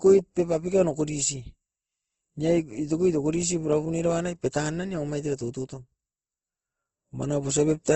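Throughout the speech, there is audible Opus compression damage, likely from a low-bitrate encode. Nothing is heard above about 8.3 kHz, so the top end sounds dull. That narrow bandwidth suggests a rate near 16 kbps. The encoder had too few bits for the detail. It kept each band's energy but filled the gaps with folded or noise-like content. Speech therefore sounds rough and grainy rather than swirly.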